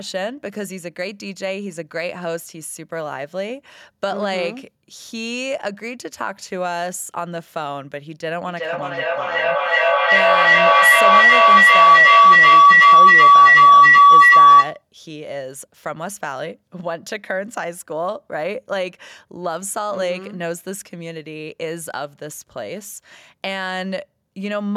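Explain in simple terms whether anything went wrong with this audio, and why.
Yes, something went wrong. From 8.44 to 14.84 seconds there is a feedback howl. Two devices in the same room were on one call. Sound from one loudspeaker reached the other microphone and went round again, getting louder each trip. It grows into a whistle near 1 kHz, with each trip round taking about 0.4 seconds. At its peak it is much louder than the speech. It stops at 14.84 seconds.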